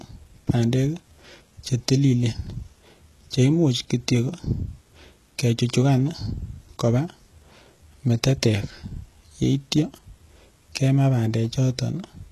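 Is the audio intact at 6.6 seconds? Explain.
No. At 6.6 seconds, as throughout the clip, the speech has gritty, lispy s sounds and a synthetic, metallic treble that stops near 12.3 kHz. This is likely HE-AAC compression at a very low bitrate, around 16 kbps, where treble is copied up from lower bands.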